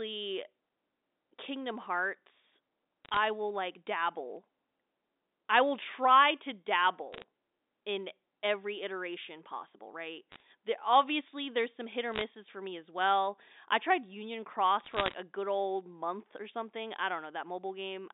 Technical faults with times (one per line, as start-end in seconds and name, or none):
3.05-3.17 bit errors on a digital phone line
7.13-7.23 bit errors on a digital phone line
10.32-10.41 bit errors on a digital phone line
12.12-12.22 bit errors on a digital phone line
14.84-15.14 bit errors on a digital phone line